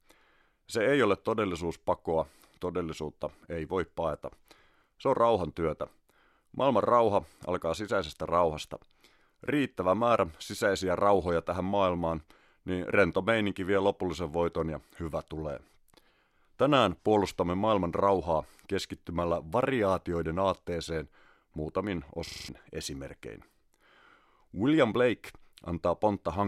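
System hang loop in this speech at 22.27 to 22.49 s: with the system frozen, one 42.67 ms slice, which fits a 2048-sample buffer, repeats five times at 23.4 Hz, replacing about 200 ms of audio.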